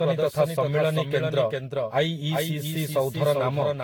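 Throughout the speech, a doubled audio track is present, most likely because the signal reached the mix twice, once directly and once through a path running roughly 0.4 s behind. The second copy sits about 5 dB below the first and carries the full frequency range with no decay or room colouring, so every syllable is followed by a clean, slightly quieter repeat that smears the timing and makes the speech sound crowded rather than reverberant.

Also present from start to finish is generation loss, likely from the audio being decoded and re-encoded around ten times with a lossy codec, each pass quantising on its own frame grid. The errors stack: the sound is swirly and hollow, consonant attacks are blurred, and the noise floor has a watery texture beyond what a single encode would leave. Nothing remains above 18.9 kHz, and the character points to repeated Vorbis passes at around 70 kbit/s.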